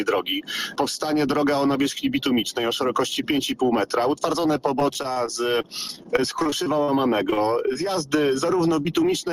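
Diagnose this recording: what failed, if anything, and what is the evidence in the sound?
Repeated packet loss (robotic sound) at the network stage runs from 4.79 to 6.90 s and again from 7.30 to 7.77 s. Dense runs of gaps, the longest about 40 ms, were each patched by extending the preceding sound, leaving a choppy texture with about 13% and 19% of those spans concealed.

A short concealed packet loss, also a network fault, occurs at 8.83–8.87 s. About 20 ms of audio failed to arrive in time. The receiver bridged the hole by continuing the last sound and blending back, which is heard as a brief smear or wobble.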